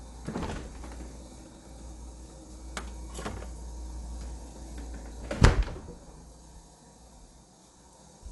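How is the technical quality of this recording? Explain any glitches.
The technical quality is clearly compromised, with codec damage running through the whole recording.

The fault is Dolby Digital compression, likely. Nothing comes through above about 11.5 kHz, so the top end is dull and closed in. At a rate that fits something around 64 kbps, the encoder narrows the band and starves many frequency lines of detail. The decoder then fills those gaps with dither noise, which gives tonal parts a rough, fluttering haze.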